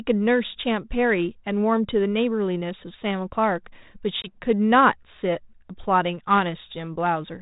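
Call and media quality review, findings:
Packet loss on ADPCM call, 4.22 to 4.37 s. Sharp 20 ms silent hole, about one packet. Speech resumes slightly distorted. Decoder predictor and step size out of step with sender. Resyncs by 4.37 s on the 32 kbit/s G.726 path.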